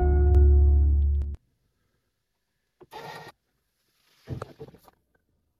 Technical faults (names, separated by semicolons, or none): doubled audio track